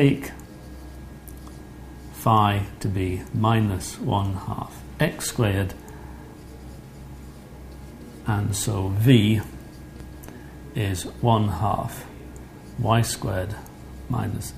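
No technical faults are audible.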